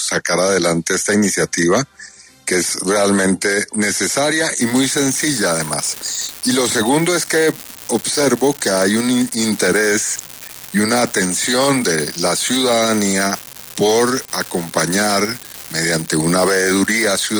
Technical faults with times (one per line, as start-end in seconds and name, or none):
4.61-17.39 unreliable data bit